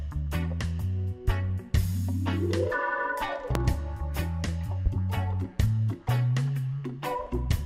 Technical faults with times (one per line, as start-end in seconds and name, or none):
3.55-3.58 loud pop
4.86-4.89 loud pop